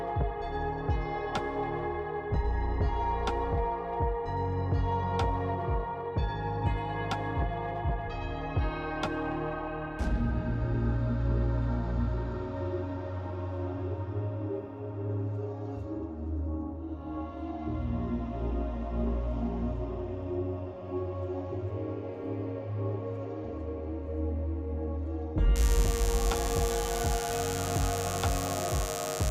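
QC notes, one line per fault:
25.56–29.30 s, mains buzz: a steady, raspy buzz comes in at 25.56 s and holds to the very end, sitting fairly high, around 10 dB under the programme. Its rough edge comes from sharp switching spikes, of the sort a dimmer or rectifier produces or an unshielded run picks up, arriving twice per cycle of the 50 Hz supply. That spiky shape stacks harmonics of 50 Hz well up into several kHz, so the buzz sounds gritty rather than like a smooth hum.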